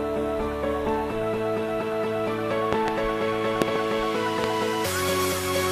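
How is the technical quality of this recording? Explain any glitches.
The recording is marred by three loud pop events. The first two, at 2.73 to 2.90 s and 3.62 to 3.78 s, each contain two pops in quick succession. The third, at 4.44 to 4.46 s, is a single pop. Each jumps roughly 20 dB above the surrounding sound. The likely cause is a sudden voltage step or pulse, from a plug, switch, static discharge or driver glitch, entering the signal path. The following circuitry shapes it into a sharp pop or thump. Unlike a dropout, the sound carries on uninterrupted beneath each pop.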